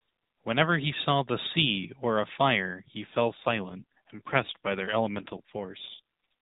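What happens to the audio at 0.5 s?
Nothing goes wrong at 0.5 s: the speech there plays through intact, with only the narrowband sound of the AMR mobile codec it is carried in.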